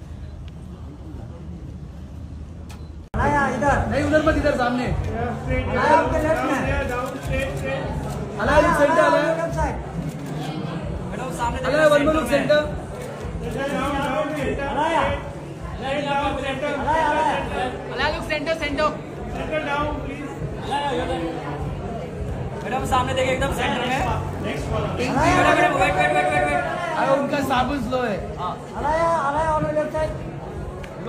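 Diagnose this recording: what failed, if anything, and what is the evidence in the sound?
A driver or buffer stage shows a block size mismatch (padded) from 23.78 to 24.58 s. It produces a 43.1 Hz buzz, which fits 1024-sample reads with zero-filled tails. The waveform shows tiny flat gaps every 23 ms, and the spectrogram shows evenly spaced vertical stripes. Playback runs at 0.999 speed, at normal pitch.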